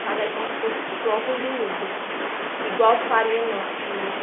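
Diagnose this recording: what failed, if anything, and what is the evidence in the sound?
Nothing stood out on listening: the speech sits within the narrow band of an ordinary G.711 telephone line, and no point in the recording sounds like a failure.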